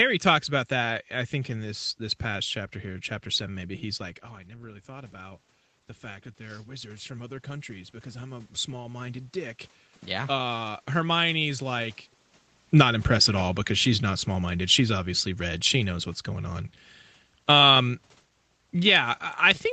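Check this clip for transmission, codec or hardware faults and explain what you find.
Automatic gain falling occurs twice: from 12.65 to 15.95 s, a drop of about 4 dB, and again from 17.35 s to the end. The gain control judged the input too loud or its background noise too strong and lowered its gain gradually. Because the room noise sinks along with the speech, this is gain control rather than the talker moving away.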